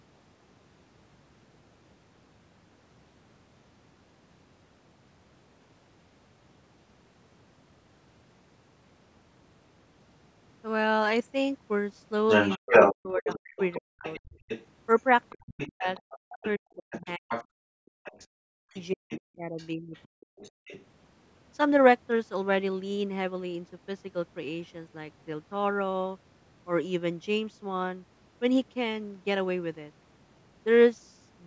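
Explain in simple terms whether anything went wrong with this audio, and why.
Between 12.28 and 17.45 s, the other side's voice leaking through is louder than the talker, with fainter scraps at 18.04–18.27 and 19.11–20.83 s. This is likely incomplete echo cancellation of the loudspeaker.

From 12.57 to 14.04 s and 15.31 to 20.72 s, the talker's voice drops out in pieces, likely speech suppressed in double talk as the canceller ducks both overlapping voices.

From 14.32 to 14.45 s, the room sound briefly falls away. This is background gated by the echo canceller, muting the microphone while the loudspeaker played.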